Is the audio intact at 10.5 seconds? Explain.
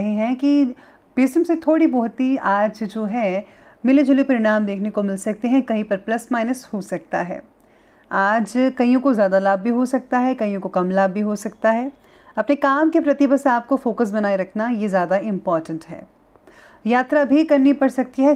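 Yes, at 10.5 seconds the audio plays through intact with no dropout, click, distortion or other fault.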